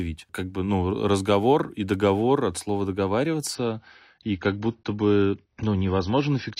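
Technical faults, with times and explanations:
3.55 to 6.6 s, adaptive stream at a lower bitrate: right at 3.55 s the speech suddenly goes dull and a bit swirly, with nothing left above about 6.6 kHz and more smeary codec artefacts, and it stays that way to the end. There's no gap, just an abrupt quality drop. That's the player switching to a much leaner version of the stream when the connection slowed, which sounds like a fall from roughly 96 to 24 kbit/s AAC.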